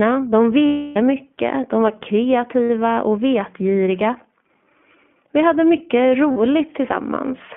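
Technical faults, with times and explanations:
Throughout, iLBC codec: speech is squeezed into a narrowband line near 150 Hz to 3.4 kHz, with plainly audible codec roughness, fitting iLBC at about 15.2 kbps with 20 ms frames.
0.66 to 0.97 s, 2.65 to 2.70 s, 6.32 to 6.37 s, lost iLBC frames: gaps of 300, 60 and 40 ms, the first ending before "mycket de var", the second before "och vetgiriga", the last after "hade mycket". The decoder fills each gap by repeating the last pitch cycle mixed with noise, fading over the long one, so it sounds like a held buzzy or breathy vowel. Frames stand alone, so speech recovers almost at once.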